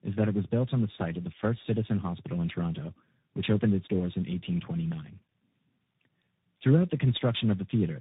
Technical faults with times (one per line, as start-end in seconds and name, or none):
0.00-8.01 tandem speech coding